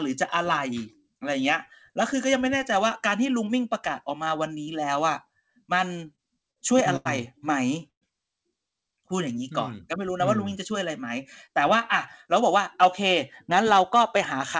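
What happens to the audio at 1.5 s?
Nothing goes wrong at 1.5 s: the speech passes through intact, carried by the call path's G.722 coding with its usual top end stopping at 8 kHz.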